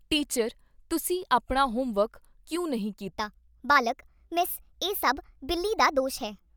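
From 3.10 s, just after "ਆਪਨਾ ਹੋਮਵਰਕ ਕਿਉਂ ਨਹੀ", the rest of the speech runs as a section at the wrong speed, playing 1.27 times too fast until the end. Pitch jumps up by about four semitones and the pace hurries in the same instant, which likely comes from that stretch being played against a mismatched clock. Because speed and pitch shift together, it differs from a plain pitch shift, where the timing would stay unchanged.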